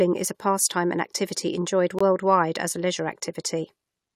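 Mismatched timestamps leave a gap between stream segments at 1.99–2.01 s, so a hard-edged 20 ms silence cuts between "pastime and activity enjoyed" and "as a leisure".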